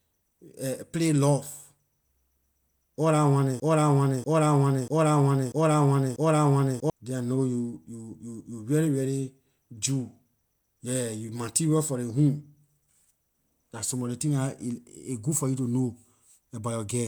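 A broken-record loop runs from 3.6 to 6.9 s in this speech clip: a 0.64 s fragment repeats exactly, back to back, five times. The likely cause is a stalled player or stream resending its last held fragment, so the speech due in that span is lost.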